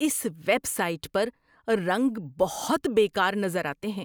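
Resampler restarted on every block, from 2.18 s to the end: the 48 kHz to 44.1 kHz conversion was run on each 10 ms block in isolation, so every block edge carries a small error, heard as a 100 Hz buzz riding on the speech.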